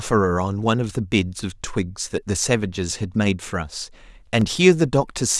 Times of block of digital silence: 4.41

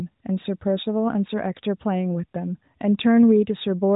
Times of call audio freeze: none

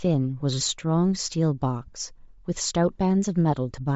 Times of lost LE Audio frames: 1.86-1.94

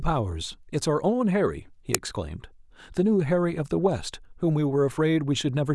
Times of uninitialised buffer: 1.95

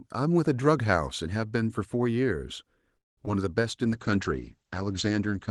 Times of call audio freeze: 2.97-3.18

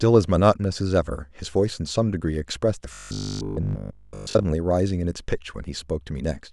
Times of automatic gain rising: none

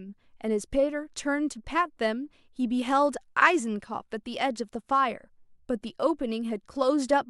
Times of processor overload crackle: none

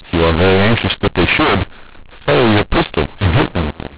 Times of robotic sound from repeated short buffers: none

